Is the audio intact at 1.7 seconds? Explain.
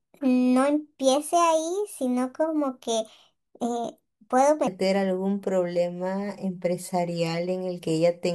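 No. At 1.7 seconds the speech sounds high and hurried, lifted by about four semitones and running noticeably quick. This is a section at the wrong speed, covering the stretch from 0.0 to 4.67 s. That part plays at 1.29 times its recorded rate, so pitch and tempo climb together instead of separately. The likely cause is an editor or player fitting this segment to the wrong clock, until normal speed returns at 4.67 s.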